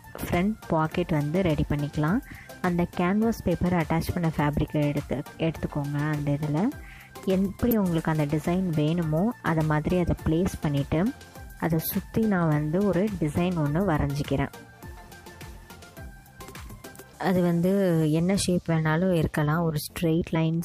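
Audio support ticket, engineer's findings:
Damaged data in a compressed stream: brief glitch at 7.71 s and 20.34 s. Decoder misreads corrupted frame bytes, loses sync, then resumes at the next frame header.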